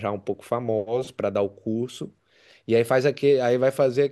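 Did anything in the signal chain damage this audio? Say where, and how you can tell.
No, the chain damaged nothing.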